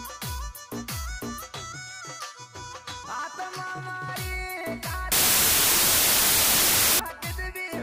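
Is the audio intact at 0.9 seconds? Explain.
Yes, the audio is intact at 0.9 seconds, with no dropout, click, distortion or other fault audible at that point.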